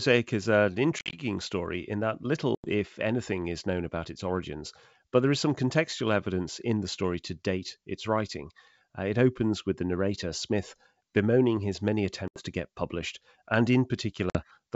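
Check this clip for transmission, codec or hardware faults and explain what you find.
The clip shows packet loss on an ADPCM call at four points. The G.722 wideband coding at 64 kbit/s carries the speech with at most faint coding damage. The first dropout runs from 0.99 to 1.20 s, between "is an" and "story in that". About 100 ms is lost there, scattered over 140 ms, with gaps up to 50 ms. The second runs from 2.55 to 2.70 s, before "if anything is known", and loses about 90 ms. The third runs from 12.28 to 12.41 s, between "bemoaning his many" and "to get published and", and loses about 80 ms. The last runs from 14.30 to 14.38 s and loses about 50 ms. Each lost stretch is filled with silence and has hard edges. ADPCM sends only differences, so the receiver's predictor and step size drift away from the sender's during the gap. When the speech resumes it comes back slightly distorted. It settles within some tens of milliseconds.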